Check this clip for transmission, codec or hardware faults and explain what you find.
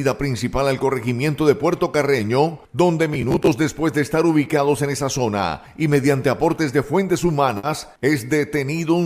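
Two faults are audible, one around 3.1 s and one near 7.6 s.

From 3.14 to 3.47 s there is robotic sound from repeated short buffers. Fresh audio is likely reaching the playback software too slowly, so it loops the most recent fragment of about 15 ms to fill the gap while the corresponding real audio is dropped. Roughly a third of that stretch is repetition. The looping stamps a steady 66.7 Hz pitch onto the sound, producing a stiff, metallic buzz that only loosely tracks the original.

From 7.57 to 7.66 s there is a burst of packet loss. A run of audio data never arrived in time to be played, and the receiver concealed the hole by extending the last sound for about 60 ms while fading it down. That gives a brief held, decaying tail. Playback then jumps ahead, and about 60 ms of the original audio is simply gone.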